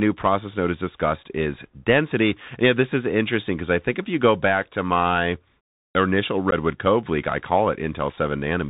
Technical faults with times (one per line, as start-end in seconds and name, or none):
0.00-8.69 Bluetooth CVSD headset codec
6.51-6.53 unconcealed Bluetooth headset packet loss